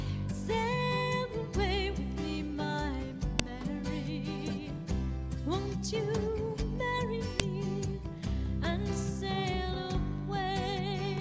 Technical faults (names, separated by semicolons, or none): file header played as audio